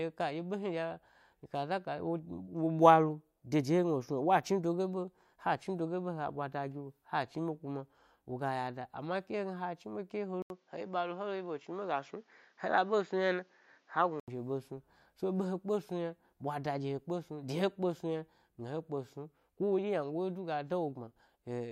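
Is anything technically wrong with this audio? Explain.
Yes. From 10.42 to 14.28 s there is an input switched to a poorer device, likely. An 80 ms silence marks the switch. The new path passes nothing above 7.3 kHz, so the speech turns duller. A faint new noise floor sits well below it. Loudness stays about the same.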